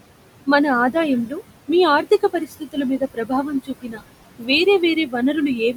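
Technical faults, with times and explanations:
Throughout, noise suppressor artifacts: the suppressor drops the room noise, which sits about 12 dB under the speech, by about 21 dB, so the background pumps in and out around the speech.
1.27–1.41 s, 2.03–2.77 s, 2.99–3.32 s, 3.64–4.01 s, 4.39–4.49 s and 4.95–5.15 s, speech cut by the noise suppressor: the suppressor mistakes quieter bits of speech for noise and ducks them by about 10 to 19 dB, so they sound swallowed and faint.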